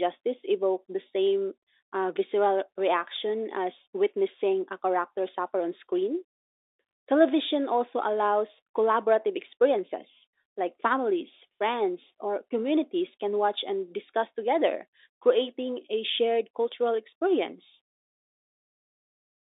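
No technical faults can be heard anywhere in the speech. The G.711 telephone coding is audible as a narrow line band running from about 300 Hz to 3.7 kHz, as expected for a 64 kbps mu-law call.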